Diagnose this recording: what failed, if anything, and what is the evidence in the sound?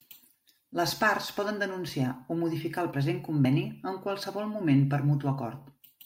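Codec stage: compressed frames skipped at 3.44 s. The speech jumps ahead about two 23.2 ms frames, roughly 50 ms.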